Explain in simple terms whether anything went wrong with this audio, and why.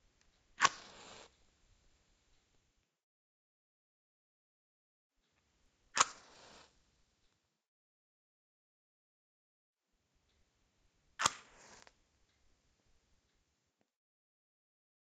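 From 5.58 to 13.58 s a steady buzz rides along with the sound, ticking 50 times a second, because the resampler restarted on every block, mishandling each 20 ms block's edges.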